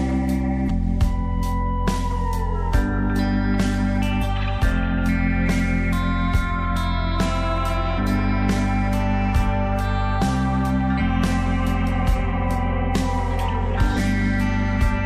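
Damaged data in a compressed stream occurs at 0.65, 4.18, 7.94, 10.96 and 13.94 s. Each time, corrupted bytes make the decoder misread frames and lose sync until it locates the next frame header, producing a brief chirp or blip lasting roughly 50 to 60 ms.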